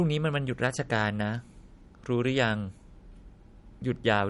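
Throughout the speech, the dull, swirly smearing of a heavily squeezed MP3 persists despite a generous file size, likely low-bitrate audio saved at a high bitrate, around 48 kbit/s first. A spectrogram shows patchy, hollowed-out upper bands that the second encoding never refilled.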